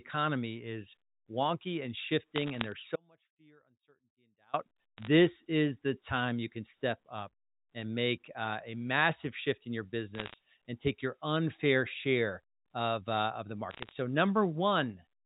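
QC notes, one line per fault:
2.96–4.54 s, audio dropout to a faint residue: the speech cuts off abruptly and returns after about 1.58 s. Only faint sound, about 35 dB below the signal, remains in the gap. The likely cause is the signal being lost while the path after the break stayed live. The waveform shows a sharp-edged, near-flat stretch, and the spectrogram a dark band.
2.36–2.72 s, 4.98–5.07 s, 10.15–10.34 s, 13.71–13.92 s, bit errors on a digital phone line: short bursts of sharp ticks and crackle sit over the speech, consistent with roughly half a percent of bits flipped. Hits on sign or high bits throw single samples far off, giving isolated waveform spikes and thin full-height streaks on the spectrogram.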